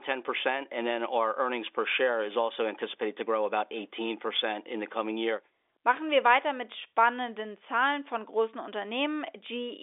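The speech comes across as ordinary fixed-line telephone audio in G.711 mu-law at 64 kbps, confined to roughly the 300 Hz to 3.6 kHz line band with nothing above about 3.7 kHz, and no technical faults can be heard anywhere in the clip.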